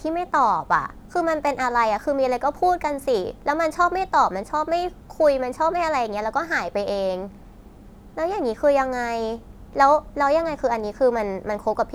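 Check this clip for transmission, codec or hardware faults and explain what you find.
Nothing in the recording points to a transmission, codec or hardware fault. The speech comes through steadily, with no disturbance at any point in the clip.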